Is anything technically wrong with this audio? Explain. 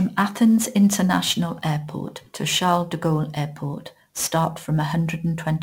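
Yes. Sample clock jitter runs through the whole speech clip. The converter's clock wanders by around ten microseconds, so each sample lands slightly off time. Steep, bright passages get an error only about 20 dB down, heard as gritty hiss. Unlike steady background noise, it disappears in pauses.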